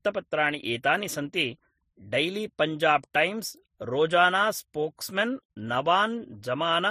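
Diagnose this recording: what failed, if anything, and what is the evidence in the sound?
Codec stage: the speech carries the signature of transcoding between lossy codecs from start to finish. Nothing is present above 15.2 kHz, and two kinds of artefact are layered together, which points to a low-rate MP3 pass likely followed by a low-rate Vorbis re-encode. A single-codec problem would show only one artefact character. Here the second encoder wastes bits re-coding the first one's debris and adds its own.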